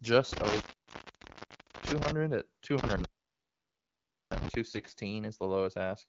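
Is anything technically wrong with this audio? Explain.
Yes, there are two kinds of fault in this speech clip.

Intermittent contact, from 0.33 to 2.11 s and again from 2.78 to 4.55 s: a loose plug or cable briefly loses connection, so the sound drops out for about 1.25 s and 1.27 s, with crackle at each break and faint hiss while the line is open.

AMR bit errors, from 2.98 to 3.07 s and 4.71 to 4.93 s: on a weak radio link, corrupted bits still decode, so the excitation pulses and fine parameters go wrong. The sound turns hoarse and gargly, worse in the longer second burst, which points to a higher error rate.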